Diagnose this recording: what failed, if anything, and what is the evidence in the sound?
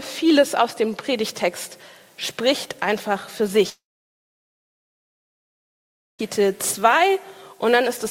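The sound breaks off at 3.69 s; a brief fading buzz continues the last sound, then about 2.4 s of silence follows until 6.21 s. The likely cause is a long network dropout, with about 2.5 s never received and concealed. Unlike a pause, playback resumes further along, skipping material.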